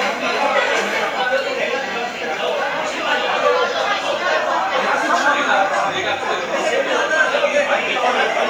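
No technical faults can be heard anywhere in this audio, and the signal stays intact and continuous throughout.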